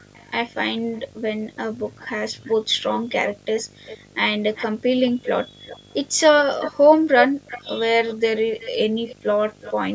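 A screen or video cable coupling into the line causes video or display buzz throughout: a 50 Hz field-rate buzz with hash, plus a 15.6 kHz line tone, roughly 25 dB below the speech.

Likely echo leak from an echo canceller failing to remove loudspeaker pickup: a delayed copy trails the speech at 0.13–0.29, 1.55–2.54, 3.1–3.98, 4.55–5.94 and 6.6–9.73 s. It lags by about 450, then 390, then 370 ms, and grows from very faint to only about 10 dB under the speech.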